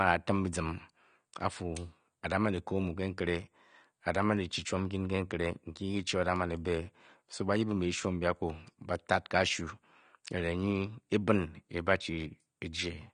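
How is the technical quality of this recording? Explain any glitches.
The technical quality is compromised by audible compression damage throughout.

Across the whole recording, the sound is dull, with nothing above 9.7 kHz, and sibilants have a watery, warbling texture. The likely cause is AAC compression, which fits AAC-LC at about 32 kbps quantising spectral lines too coarsely. Unlike a simple low-pass filter, it also smears and flutters what remains.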